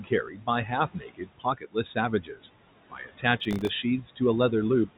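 Throughout the clip, the background noise ducks away between phrases and swells back up beneath them. These are noise suppressor artifacts. The suppressor decides frame by frame which frequency bands hold only steady noise and turns those down, by about 18 dB here. That noise is room noise sitting about 18 dB below the speech, heard through a call path with G.711 mu-law that stops at 4 kHz.

Between 0.28 and 0.48 s, 0.94 and 1.76 s, 2.22 and 2.42 s, and 2.9 and 3.24 s, parts of the speech fade or sound swallowed, with soft sounds and word edges sinking into the background. This is speech cut by the noise suppressor, which mistook stretches of low-level speech for noise and attenuated them along with it. The drops reach about 11 dB in the first span, about 19 dB in the second, and about 17 dB in the last two.

From 3.40 to 3.69 s, a gritty burst of crackle tears across the sound and then stops. 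This is processor overload crackle. The processor fell behind and missed a run of audio deadlines, around twenty of them. Each missed slot was filled with silence, leaving a tiny hard-edged gap. Each gap lasts one buffer of roughly 1.5 ms, and they are close enough together to fuse into one continuous rasp.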